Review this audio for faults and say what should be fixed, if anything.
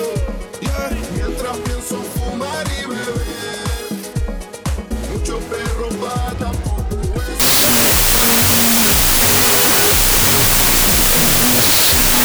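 Wrong sample width from 7.40 s to 12.25 s: 32-bit float data are being read as 16-bit integers. Each float sample splits into two integer values, so the sound plays at half speed, an octave low, buried in loud noise from mismatched bytes. Prevent it by carrying the sample format with the data and checking it wherever the stream is decoded.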